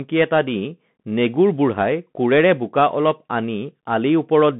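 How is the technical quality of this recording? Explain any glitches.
The recording has been squeezed through a Bluetooth CVSD headset codec for its whole length, and the damage is plainly audible. Throughout the speech, nothing reaches above about 3.8 kHz and the usable band sits roughly between 150 Hz and 3.5 kHz. CVSD codes each sample as a single up-or-down step whose size adapts, which fits a 64 kbps link. Sharp, loud rises outrun that step, so s sounds come out scratchy and a grainy hiss trails under the speech. Unlike plain telephone filtering, the narrow band here also carries that granular step noise.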